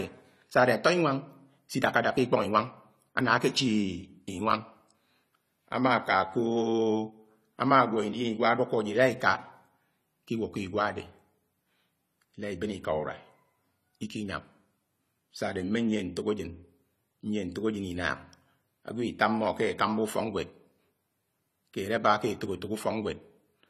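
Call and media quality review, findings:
Dull, smeared speech throughout, no content above 14.1 kHz, swirly fizz on sibilants; likely AAC compression, coarse quantisation of spectral lines fitting AAC-LC near 32 kbps.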